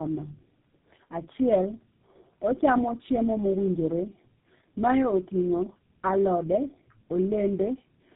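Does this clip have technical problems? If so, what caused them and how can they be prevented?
Yes. The speech carries tandem speech coding from start to finish: it sounds rough, muffled and warbly, with nothing above 3.7 kHz. That fits three low-rate speech codecs in a row, such as two G.729A hops and a GSM full-rate hop, with G.711 conversions between them. Each coder re-encodes the previous coder's degraded output, so the errors stack. A single low-bitrate codec leaves a milder, steadier roughness. The stacked roughness and warble here point to repeated coding. To prevent it, pass the coded speech through unchanged between links, using transcoder-free or tandem-free operation, so that it is decoded only once at the far end.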